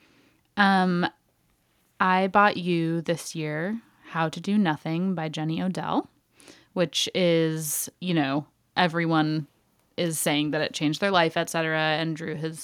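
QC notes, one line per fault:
No faults heard anywhere in the speech.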